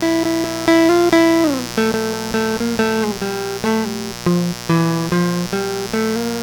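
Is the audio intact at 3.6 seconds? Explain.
No. Mains buzz runs through the whole music clip, including 3.6 seconds. Switching spikes locked to the 60 Hz supply, arriving twice per cycle, add harmonics climbing into several kHz, heard as a steady raspy buzz sitting only about 10 dB below the music.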